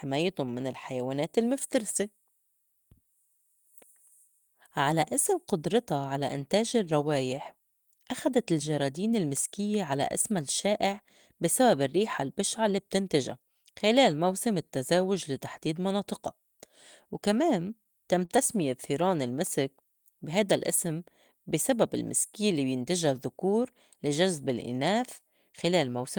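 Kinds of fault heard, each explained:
Short stall from a late packet: at 18.25 s one sound is held about 30 ms too long, then resumes unbroken; a late packet emptied the jitter buffer, so the receiver stretched audio.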